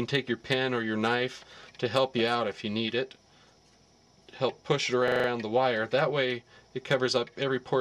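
At 5.08 s there's a system hang loop running to 5.28 s. Something on the machine or driver side froze while the sound hardware kept replaying its ring buffer, so one 40 ms piece of audio loops exactly five times. That gives a repeat rate of 25 Hz, which comes across as a quick machine-gun stutter. Once it releases, the audio picks up again with essentially nothing missing from the timeline.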